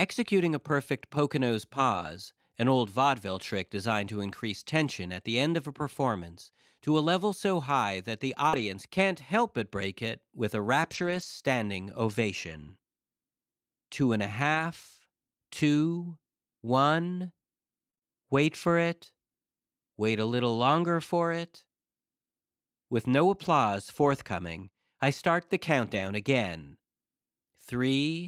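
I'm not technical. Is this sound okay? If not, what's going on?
No. The recording is speech sent over a network, and parts of it arrived damaged or late in three different ways.

Lost packet rebuilt from error correction: speech travels in small packets, and some went missing. Each following packet carried a rough backup copy, and the receiver played that copy instead. Nothing drops out, but those moments sound grainier and noisier. This happens at 1.93–2.07 s, 8.53–8.63 s, 10.95–11.25 s (the longest, between "break it with a" and "standing ovation"), 14.55–14.61 s, 23.45–23.47 s and 25.93–26.07 s (right after "forthcoming I start the").

Short concealed packet loss: at 8.49–8.55 s about 40 milliseconds of audio never arrived, and no backup copy was available. The receiver guessed by stretching the last bit of sound it had, then blended back into the real audio. You hear a brief smear or wobble here, running straight into the grainy patch described above.

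Repeated packet loss (robotic sound): from 17.91 to 18.03 s, just before "wait for it", packets went missing three times in quick succession. Each gap was patched by stretching the previous sound, and about half of that short stretch is guesswork. The result is a brief choppy sound with pieces missing.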